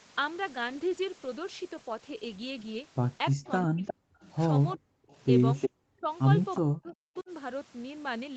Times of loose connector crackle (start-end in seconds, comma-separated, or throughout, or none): none